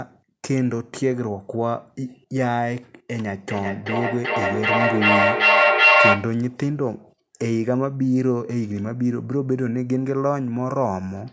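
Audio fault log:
3.5–6.47 s, feedback echo between two devices: the speech returns at a fixed interval of roughly 0.4 s, each pass thinner and more ringing, and the repeats build up instead of decaying, peaking about 7 dB above the direct speech. This points to a second device in the room replaying the call into the first microphone, where that device's echo canceller cannot remove sound it did not play itself. The repeats stay within the call path's 8 kHz band.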